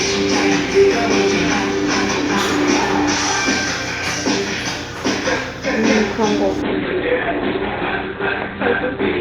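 A recording of everyday sounds that, at 6.62 s, abruptly turns dull through to the end, with nothing above about 4.2 kHz and no gap at the switch. This is an adaptive stream at a lower bitrate, consistent with the stream stepping down from roughly 64 to 12 kbit/s Opus when the connection slowed.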